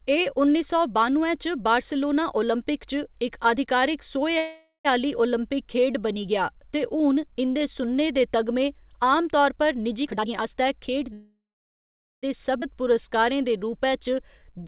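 At 4.38 s a call audio freeze begins and lasts until 4.87 s. The speech stops and the last sound carries on as a fading buzz or hiss, then about 120 ms of silence. The cause is likely packets held up in transit, so the jitter buffer ran dry. When audio resumes it picks up where it left off. Nothing is lost. About half a second of delay has been added.

From 10.03 to 11.12 s there is a jitter buffer speed-up. The buffer held more than its target. The receiver cut out short pitch-period pieces, over and over. Around 0.4 s is removed in all. The speech runs at about 135% speed. Pitch stays the same. It sounds rushed.

Right after, at 11.13 s, comes a second call audio freeze, lasting to 12.25 s. It is longer. A brief fading fill gives way to about 840 ms of silence. Again the likely cause is delayed packets starving the buffer. The speech then continues without loss. About 1.1 s of extra delay builds up.

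At 12.61 to 12.64 s the audio skips ahead. Roughly a second of speech is dropped. The two sides are butted together with almost no gap. The jump is abrupt. It sheds much of the delay gathered just before.

From 12.74 to 14.64 s a jitter buffer slow-down follows. The buffer was running low or had just raised its target. The receiver repeated single pitch periods and bits of pause to rebuild its reserve, adding about 193 ms. Speech plays at roughly 90% speed. Pitch holds steady. Sounds are drawn out. All of this sits on narrowband call audio with nothing above 4 kHz.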